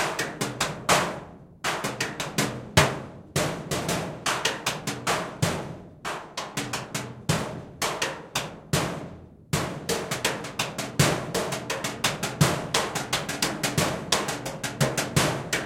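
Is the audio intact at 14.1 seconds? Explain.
No. At 14.14 s there is a brief skip, with about 20 ms of sound gone. This is audio missing between chunks. The likely cause is a recorder working in 4-second blocks, dropping a sliver at each changeover and butting the edges together.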